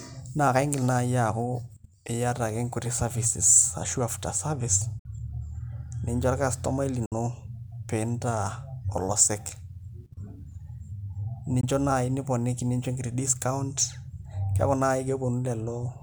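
Audio packets likely failed to reach the headphones in time and were dropped, causing a Bluetooth dropout three times. The speech cuts to silence from 4.99 to 5.06 s, just after "ashu after services", and from 7.06 to 7.12 s, just after "pee incho orkastomai", each losing about 56 ms. A briefer hole, about 19 ms, falls at 11.61 to 11.64 s. Each time the speech resumes further along, as if it had kept playing underneath.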